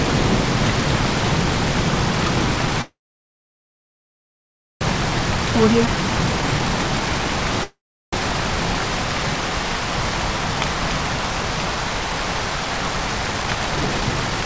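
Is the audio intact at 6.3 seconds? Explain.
No: a jitter buffer speed-up runs from 5.96 to 7.60 s, trimming about a tenth of a second in short pitch-period cuts, so the sound plays at 105% speed without changing pitch.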